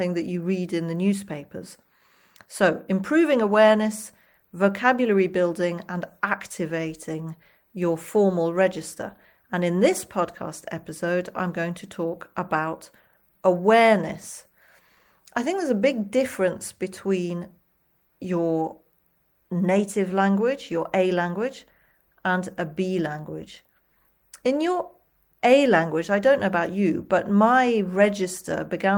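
Nothing in this speech recording stood out as a technical problem on listening.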